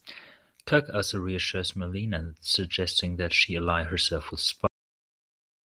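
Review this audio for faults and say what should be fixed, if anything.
The speech has a cut-off end at 4.67 s, right after "she ally herself with". The sound stops mid-utterance and falls straight to digital silence for the last second, with no natural decay. The final buffers were never written or played. Flush and close the buffer fully before the file is finalised.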